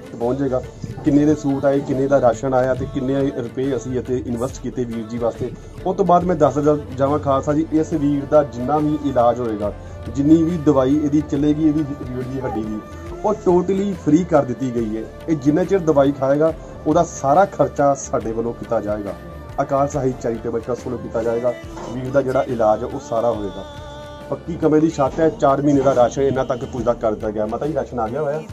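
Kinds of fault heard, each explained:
Dropped samples: four isolated sharp clicks, likely from a fraction of a millisecond going missing, each a sudden waveform jump and thin vertical spectrogram line.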